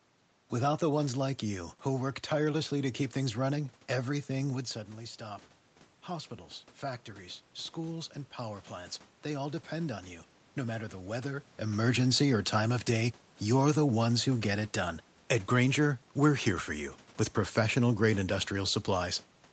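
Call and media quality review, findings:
Automatic gain rising, 4.5 to 11.54 s, after "keep things running everything", up to "emergency or time of". Speech drops about 10 dB as the talker moves back, then voice and room noise swell together by about 6 dB over several seconds. Probable component: AGC in capture processing, slowly raising gain toward target level.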